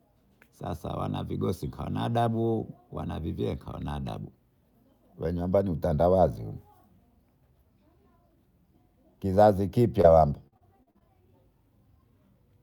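At 10.01 to 10.06 s the speech has a single short concealed packet loss. About 20 ms of audio failed to arrive in time, and the receiver bridged the hole by extending the preceding sound before easing back into the real signal. It comes across as a brief smear or wobble, possibly swallowing a small sound. Because it is one isolated patch, it reads as a momentary blemish rather than a sustained change in texture.

From 10.48 to 11.02 s comes repeated packet loss, producing a robotic sound. Over roughly half a second there are six separate gaps, the longest 44 ms, and about a third of the span is synthesised fill rather than real audio. Each hole is patched by continuing the last sound, and the next one follows soon after. The result is choppy speech with fragments missing, unlike the earlier event's lone smear.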